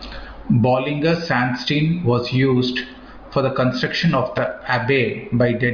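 No fault can be heard anywhere in this speech recording. Nothing in the audio breaks, drops out or distorts at any point.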